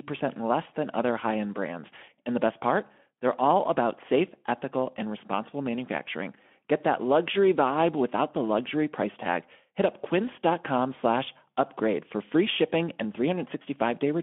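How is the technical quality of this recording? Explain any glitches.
No glitches turn up anywhere in the recording. The speech comes through a Speex link at 15 kbps, confined to a telephone-like band of about 200 Hz to 3.4 kHz, with only light codec coloration audible.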